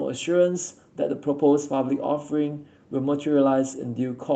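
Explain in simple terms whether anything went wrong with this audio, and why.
Nothing went wrong with this audio.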